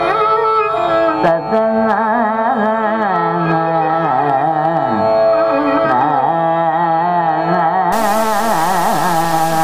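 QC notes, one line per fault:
7.92–9.64 s, low bit depth without dither: the final stretch was likely reduced to about 4 bits and truncated with no dither, leaving only a handful of amplitude steps. Because the rounding error tracks the waveform, it sounds like grainy distortion on quiet sounds or near-steady hiss where the material is dense, sitting only roughly 15 dB under the signal. Quieter passages turn gritty and the faintest ones sputter or collapse to silence.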